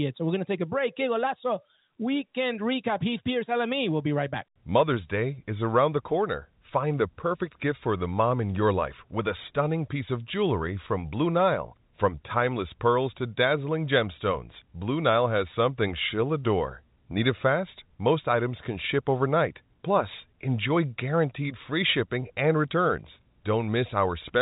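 No technical faults are audible in this speech.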